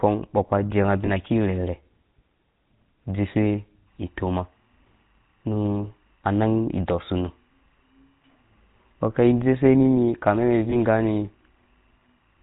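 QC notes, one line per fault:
Throughout: GSM full-rate codec. The sound is coarse and buzzy with a gravelly edge, and nothing survives above 4 kHz. This points to the 13 kbps full-rate coder, which rebuilds speech from a vocal-tract model driven by sparse, regularly spaced pulses, discarding most of the natural excitation.
1.06–1.09 s and 10.7–10.76 s: lost GSM frames. The first comes right after "ba jeu". Each is a brief metallic, ringing hold of about 20 ms, consistent with a single dropped frame. The decoder covers the gap by repeating the last good frame's settings.
3.87 s to the end: timecode bleed. A faint, steady chirping warble sits behind the speech, very low at roughly 45 dB below it. The square-wave timecode flips between pitches near 1 and 2 kHz, and its rhythm fits 23.976 fps code leaking from an adjacent track or cable.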